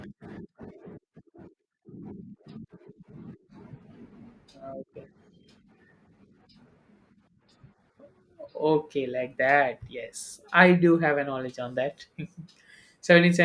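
No technical faults occur at any point in the recording, so there is nothing to describe in time order.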